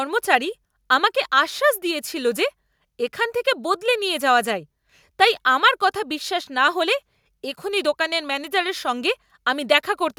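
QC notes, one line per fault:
No faults heard in this recording.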